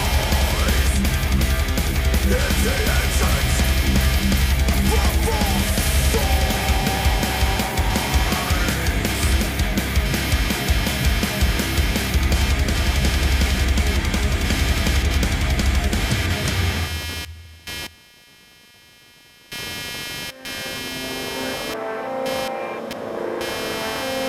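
A buzzing, chirping pattern pulsing around 200 times a second runs throughout, roughly 10 dB below the sound: computer activity noise, where processor, graphics or mouse load disturbs the audio ground.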